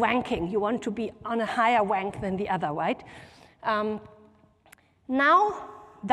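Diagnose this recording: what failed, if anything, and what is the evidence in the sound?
Nothing failed; no faults heard.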